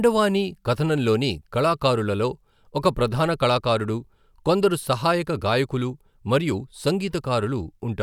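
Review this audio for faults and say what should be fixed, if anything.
Nothing stood out on listening, so there is nothing here that needs fixing.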